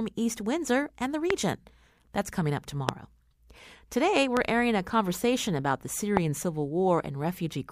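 You get a loud pop four times, at 1.30 to 1.32, 2.89 to 2.91, 4.37 to 4.39 and 6.17 to 6.19 s. Each is a single sharp click lasting about 20 ms and peaking roughly 20 dB above the speech, which carries straight on underneath. What's happening is a brief voltage spike landing on top of the signal, likely from a switch, static discharge or a driver glitch, and the downstream circuitry turns it into that hard pop.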